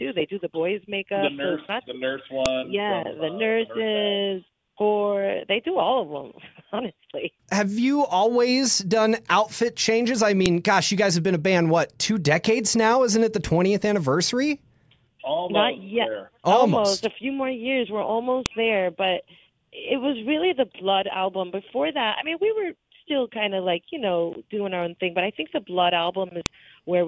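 Sharp, loud clicks land at 2.46, 10.46, 18.46 and 26.46 s. That is the file header played as audio, repeating every 8 s where joined pieces begin.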